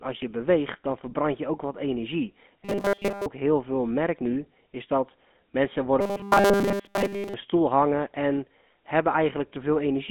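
Throughout, the speech carries the gravelly, buzzy roughness of the GSM full-rate codec, consistent with its 13 kbps coding. The band is confined to roughly 200 Hz to 3.5 kHz, with nothing above 3.5 kHz. Unlike plain narrowband filtering, the damage is grainy texture, not just dullness.

From 2.65 to 3.26 s, after "je ook wat energie" and before "heel veel merkt nu", the speech turns into a rigid metallic buzz at 200 Hz. This is robotic sound from repeated short buffers, likely caused by audio arriving too seldom so that the last 5 ms is replayed, with most of the real audio skipped. The fixed pitch sets it apart from codec grit, which follows the voice's own pitch.

From 6.01 to 7.35 s, between "nu is dat mensen" and "stoel hangen en", the same 200 Hz robotic buzz returns for longer. It likely comes from essentially all the audio being replaced by repeats of 5 ms buffers, so only the rough shape of the speech survives.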